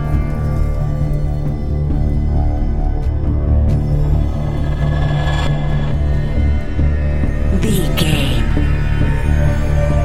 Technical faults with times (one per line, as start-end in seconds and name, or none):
6.34-7.54 channel delay (comb filtering)